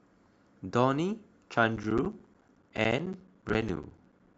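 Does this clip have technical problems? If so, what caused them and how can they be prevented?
Yes. Compressed frames were skipped at 1.53 s, where about three 10 ms frames (roughly 30 ms of speech) vanish, and again from 3.52 to 3.54 s, where about two frames go missing. On a waveform the speech envelope jumps at those points, and a spectrogram shows a vertical seam. Preventing it means protecting the stream with error correction or retransmission and concealing lost frames in the decoder.

From 1.70 s to the end there is a block size mismatch (padded). One stage hands over shorter blocks than the next reads, and the shortfall is filled with silence. That inserts a regular gap, heard as a buzz at 13.9 Hz, and the speech runs slower by a factor of 0.889 at about normal pitch, which fits 1024-sample blocks feeding a stage expecting roughly 1152. The waveform shows near-silent stretches repeating every 72 ms, and the spectrogram shows evenly spaced vertical dropout stripes. 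Matching the block sizes between the stages, or buffering between them instead of zero-padding, prevents it.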